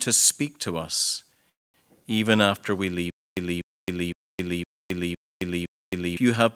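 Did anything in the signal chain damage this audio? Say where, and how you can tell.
Yes. A call audio freeze at 1.49 to 1.76 s breaks the speech for about 0.25 s, nearly all of it silent. Playback then resumes exactly where it stopped, with nothing lost, which points to network packets likely arriving late and starving the jitter buffer.

A stutter with silent gaps runs from 3.10 to 6.17 s. The same 243 ms fragment repeats six times, separated by 268 ms of digital silence, on a steady 0.51 s cycle. The speech that belonged in that stretch is gone, consistent with a stalled playback stage likely retrying its last buffer.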